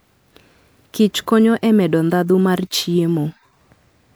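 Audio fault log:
Nothing worth logging here, as the speech comes across with no technical problems anywhere along the way.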